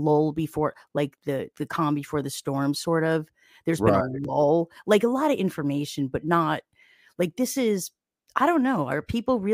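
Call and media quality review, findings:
No audible faults found in the speech recording.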